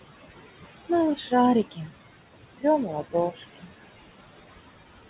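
Speech carries noise suppressor artifacts throughout, with the background pulled down about 19 dB between phrases, showing on a spectrogram as fainter gaps. Speech cut by the noise suppressor hits at 1.71–2.16 s, 2.85–3.15 s and 3.31–3.68 s, with drops of about 19–20 dB across roughly 150–200 ms each, appearing as sudden notches in the waveform envelope. Meanwhile, room noise sits about 12 dB under the voice and the call codec leaves nothing above 4 kHz.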